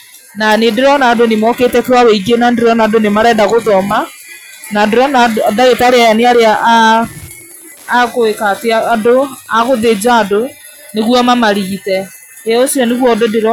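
Wi-Fi interference runs from 5.83 s to 10.18 s, a faint, steady ticking under the speech, roughly 35 dB below it. A nearby Wi-Fi radio was transmitting its beacon every 102.4 ms, and some part of the audio circuit acted as a crude detector, rectifying those radio bursts into small audible pulses. The result is a regular tick close to ten times per second, mechanical in its evenness.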